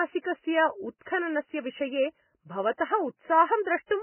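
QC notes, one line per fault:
throughout: heavy Vorbis compression, likely from a bitrate near 10 kbps; nothing above 3 kHz, and coarse quantising leaves speech hissy, grainy and smeared.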